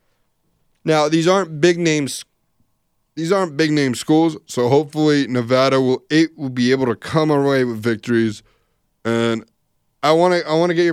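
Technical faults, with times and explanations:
3.67–5.89 s and 7.83–9.97 s, drift correction step: in each span the speech abruptly slows by about 5.9% and drops about 104 cents, roughly a semitone, with speed and pitch moving together, then snaps back to normal at the end. The likely cause is clock-matching software stepping the playback rate down to refill its buffer, and then restoring the nominal rate once the buffer level recovers.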